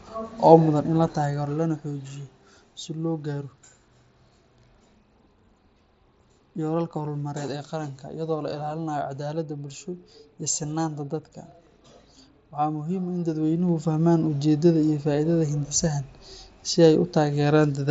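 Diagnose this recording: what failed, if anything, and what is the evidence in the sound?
A ticking, zipper-like texture rides on the speech from 13.23 to 14.00 s as the level changes by roughly 10 dB. This is zipper noise: the gain moves in unsmoothed 1 dB steps at roughly ten per second, pointing to per-buffer gain updates in the driver or buffer stage.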